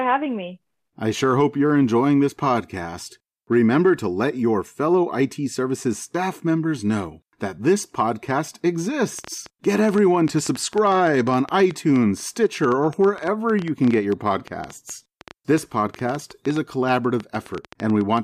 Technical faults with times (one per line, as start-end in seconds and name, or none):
9.19-18.18 train of clicks